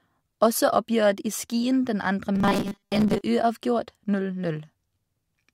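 A speech clip in which, from 2.35 to 3.24 s, the voice collapses into a rigid, metallic buzz near 200 Hz that only loosely tracks the syllables. This robotic sound from repeated short buffers is likely caused by a stalled stream, with most of that stretch filled by looping a 5 ms fragment instead of fresh audio.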